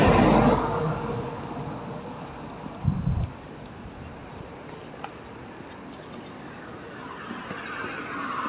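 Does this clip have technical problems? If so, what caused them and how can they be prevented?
No, there are no technical faults in this clip of sounds. It has passed through a call path using G.711 mu-law at 64 kbps, so nothing is heard above 4 kHz, which is simply the normal narrowband limit of that codec.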